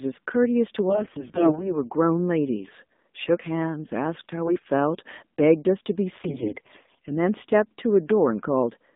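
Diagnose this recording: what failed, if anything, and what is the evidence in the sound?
The speech has been through the AMR narrowband mobile codec at the codec stage. It is confined to roughly 200 Hz to 3.7 kHz, with a plainly buzzy, synthetic texture that fits the low 7.4 kbps mode. A spectrogram shows a hard ceiling near 3.7 kHz and smeared harmonics.

AMR bit errors, a network-stage fault, hit from 0.90 to 1.74 s, 4.46 to 4.70 s, and 6.24 to 6.98 s. Corrupted excitation and fine parameters make the speech hoarse and gargly while its pitch and level hold. The waveform envelope stays intact, but the spectrogram shows scattered, noisy harmonics there.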